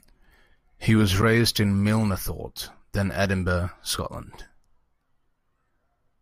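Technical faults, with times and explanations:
1.22 s, block of digital silence: for about 10 ms the speech drops straight to silence and returns with no fade, most likely because the output buffer was not filled in time. The abrupt edges at each end merge into a single short tick or dip.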